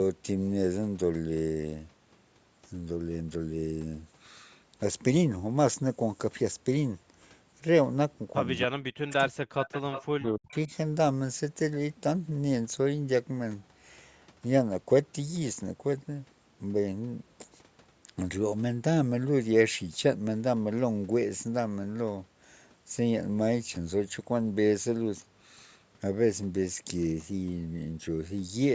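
From 8.66 to 9.36 s, the speech dips. The deepest dips reach about 40 dB, and roughly half a second is affected in all. This is speech suppressed in double talk. Both ends were likely talking at once. The echo canceller could not tell this talker from the far-end echo, so it turned everything down.

From 9.56 to 10.03 s, a delayed copy of the speech comes through. It trails the original by 301 ms and sits about 10 dB below it. This is an echo leak. A loudspeaker at the far end likely fed the sound back into its microphone, and the canceller there did not remove all of it. The leaked copy returns as a late repeat.

From 10.03 to 10.72 s, the same double-talk suppression returns. Again the dips reach about 40 dB, over roughly half a second in total. The speech dips while the canceller clamps down. The call's microphone processing limits the band, so nothing is heard above 8 kHz throughout.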